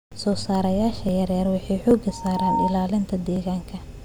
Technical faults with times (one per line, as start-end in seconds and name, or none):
1.09 dropped buffer (overrun)
1.91 dropped buffer (overrun)
2.08-2.79 loudspeaker feedback squeal
3.36 dropped buffer (overrun)